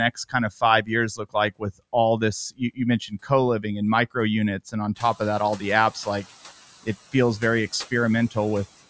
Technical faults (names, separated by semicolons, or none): speech cut by the noise suppressor; noise suppressor catching up